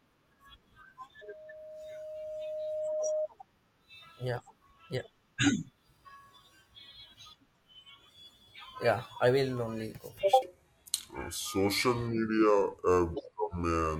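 Loudspeaker feedback squeal runs from 1.21 to 3.28 s. A microphone is re-amplifying its own loudspeaker, and at 618 Hz the loop gain passes unity. That single tone swells over about two seconds until it roughly matches the speech in level.

A section at the wrong speed starts at 10.42 s and lasts to the end. The speech plays at 0.688 times its recorded speed, so it sounds deep and dragged, about seven semitones low. The likely cause is the section being clocked at the wrong rate.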